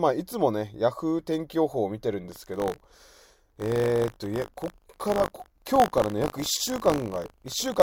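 Speech, with buffer tearing from 2.3 s to the end: a robotic 50 Hz buzz rides on the signal. The ring buffer's writer and reader have slipped, so a small slice of each 20 ms period replays audio from around 40 ms earlier, hard-joined at both edges.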